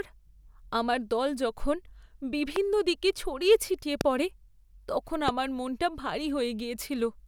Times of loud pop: 2.56-2.58, 4.01-4.03, 5.28-5.30

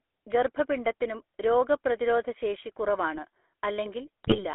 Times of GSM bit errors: 4.24-4.44

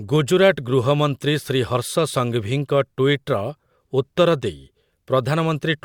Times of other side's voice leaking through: none

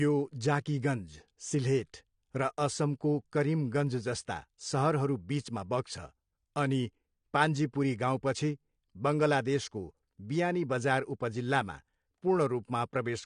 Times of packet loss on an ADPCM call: none

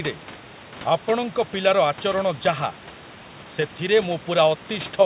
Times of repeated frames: none

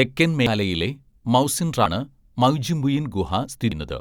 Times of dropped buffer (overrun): 0.46, 3.72

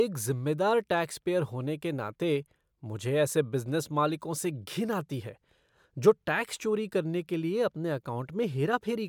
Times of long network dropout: none

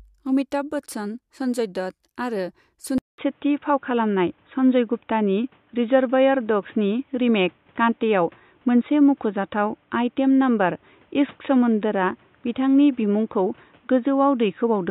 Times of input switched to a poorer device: 2.98-14.90

